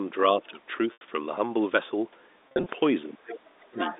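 At 0.93 s the network dropped about 80 ms of speech, which fits eight 10 ms packets, and the receiver concealed it by packet loss with pitch repetition, looping the last pitch period. Up to 1.01 s the sound holds briefly on a slightly buzzy, sustained tone before normal speech resumes.

From 2.48 to 2.66 s losses struck again, 120 ms in total but scattered over 180 ms, with no single gap longer than 40 ms. Each short hole is bridged by repeated pitch periods, so the speech turns intermittently droning and buzzy rather than falling silent.

From 3.11 to 3.95 s both ends were likely talking at once, and the echo canceller, unable to separate its talker from loudspeaker echo, attenuated everything. This is speech suppressed in double talk: the voice dips in pieces, roughly half a second in all, sinking by up to about 25 dB.

Within that stretch the far end leaks back in, the other side's voice leaking through, likely because echo cancellation left some loudspeaker sound in the microphone. 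A faint scrap sits about 20 dB down at 3.33 to 3.40 s. A stronger one arrives near 3.78 s, only about 10 dB below the talker, and runs to the end. Both stay within the narrow G.711 telephone band.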